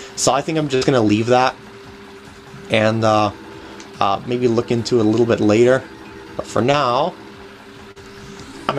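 Right near the start, from about 0.75 to 0.83 s, there's a burst of packet loss. Roughly 60 ms of audio never made it to the player in time, so the receiver stretched the last bit of sound it had and faded it down across the hole. You hear a brief held, dimming continuation, then the sound picks up a little further along with that 60 ms simply gone.

Later come two cases of short concealed packet loss. The first, around 6.71 to 6.75 s, is small: about 20 ms was missing and got patched by extending what came just before, so it passes as a brief smear. The second, from about 7.91 to 8.00 s, is a bigger gap of about 40 ms, filled with roughly 42 ms of synthesised continuation and then blended back into the real audio, which gives a wobble at that spot.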